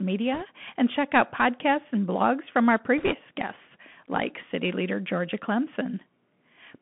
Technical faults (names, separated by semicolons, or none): Bluetooth CVSD headset codec; bit errors on a Bluetooth voice link